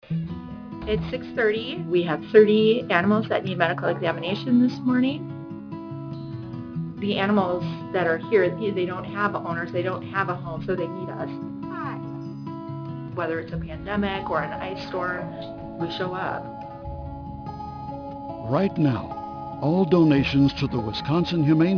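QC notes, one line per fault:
Throughout: aliasing. Content above about 5.5 kHz has been folded back down into the band instead of being removed, which points to a downsample from 48 kHz to 11 kHz with no anti-alias filter ahead of it. The mirrored energy lands at wrong, unrelated frequencies below the fold, roughly 25 dB under the signal, giving sibilant and bright material a gritty, metallic edge, while the spectrum stays dense right up to the 5.5 kHz band edge.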